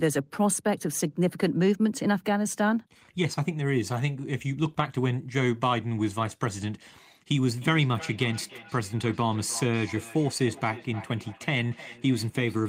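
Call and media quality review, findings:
Feedback echo between two devices, 7.4 s to end. Speech returns roughly every third of a second, thinner and ringier, peaking about 18 dB under the talker. Second device in the room replays it; local canceller can't remove it.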